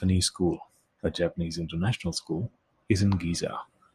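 Nothing technically wrong turns up anywhere in this short bit of speech, so there's no fault to point to.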